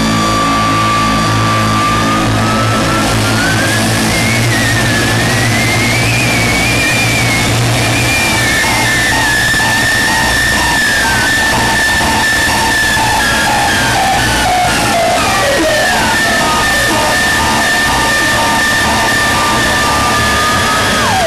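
No technical faults occur anywhere in the audio.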